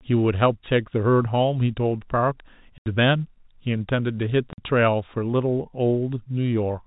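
At 2.78 s the speech drops out for 80 ms, and again at 4.53 s for about 50 ms: packet loss filled with silence. Both holes fit 10 ms packets. The receiver played dead air, so the holes have hard edges in the telephone-band G.711 audio.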